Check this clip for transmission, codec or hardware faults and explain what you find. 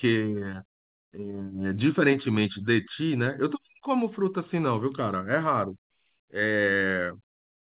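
Nothing wrong can be heard in this speech recording. It has passed through ordinary mu-law G.711 telephone coding at 8 kHz, so the sound stops at 4 kHz and a faint quantisation noise about 38 dB down follows the level, as that format always does.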